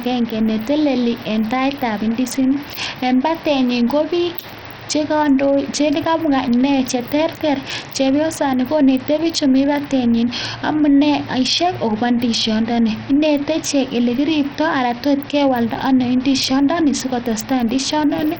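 Throughout the speech, a starved encoder is likely at fault: Bluetooth SBC compression at a bitrate as low as 64 kbps. Upper sub-bands lose their bits, so treble flickers in and out beneath the 19.9 kHz ceiling, and heavy gritty quantisation noise and aliasing coat everything.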